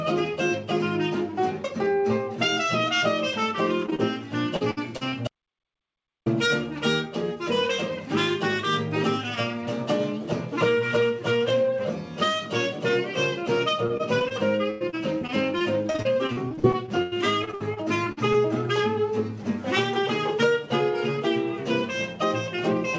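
Around 3.86, 3.90 and 3.95 s there's short concealed packet loss: a few 20 ms packets arrived too late, and the decoder patched each hole by extending the previous sound, so you get a quick smear or wobble. From 4.56 to 5.14 s repeated packet loss sets in, with four holes, the longest about 62 ms, and roughly a third of that stretch is filled in, which makes it choppy and robotic. Then from 5.28 to 6.26 s there's an audio dropout to silence, almost a full second of dead silence with no room tone, most likely from a lost input or a stray mute. The robotic repeated loss returns from 13.86 to 14.32 s and again from 14.70 to 18.36 s. That last stretch has 23 holes up to about 100 ms long, so about a fifth of it is concealed. Throughout, the G.722 call path leaves nothing above 8 kHz.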